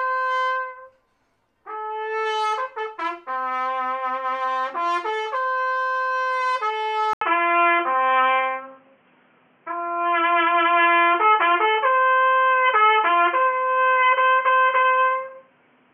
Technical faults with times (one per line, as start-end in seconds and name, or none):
7.13-15.93 input switched to a poorer device